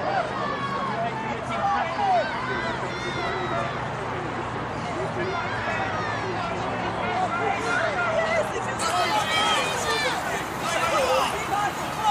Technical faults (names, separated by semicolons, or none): pre-emphasis left on